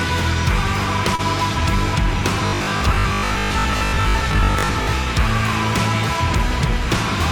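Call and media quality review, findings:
Short stall from a late packet, 1.15–1.21 s: sound held about 34 ms, nothing lost, playout now 34 ms later. Jitter buffer ran dry waiting, stretched the tail.

Robotic sound from repeated short buffers, 2.47–4.97 s: rigid 50 Hz metallic buzz, about half the audio repeated. Likely starved playback looping 20 ms chunks, skipping the real ones.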